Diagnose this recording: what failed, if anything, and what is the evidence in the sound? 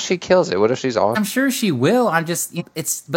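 At the codec or storage stage, whole compressed frames were never decoded, either because they were missing from the file or because the decoder rejected them as damaged. This is compressed frames skipped. Just after "if she's", at 1.12 s, the speech jumps ahead by about half a second. At 2.56 s it jumps by about 0.3 s. Those jumps fit runs of around ten and seven frames of 46.4 ms each. Each join is a brief discontinuity where the audio resumes.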